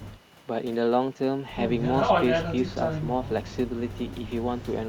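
No technical faults can be heard anywhere in the recording.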